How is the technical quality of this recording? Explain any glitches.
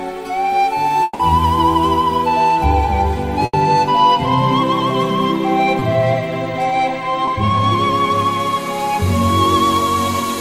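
The recording has four network-related glitches, all from audio that failed to arrive in time, across three kinds of loss.

From 1.03 to 1.21 s there is a gap of about 160 ms, most likely a long network dropout. The receiver had nothing to play, so it stretched the last sound it had into a buzz or hiss that decays. That fill covers the whole gap, with no stretch of pure silence. The sound then picks up further along, and the 160 ms in between is simply gone.

At 3.45 to 3.55 s a burst of packet loss removes about 80 ms. The decoder kept repeating the preceding sound while turning it down, so a voiced sound turns into a held buzz and anything else into a fading hiss. When packets return, playback jumps ahead and the missing stretch is skipped entirely.

Short concealed packet loss occurs twice, at 5.79 to 5.83 s and 7.25 to 7.29 s, each around 20 ms of fill. The receiver extrapolated from the last pitch or from shaped noise and then crossfaded back into real audio. 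Each sounds like a brief smear or wobble, and a very short sound falling in the gap can disappear.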